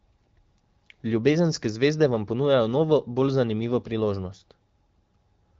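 Listening closely to this speech, carried over the AMR wideband (HD Voice) codec at 12.65 kbit/s with its usual top end near 7.5 kHz, nothing stood out as a technical problem.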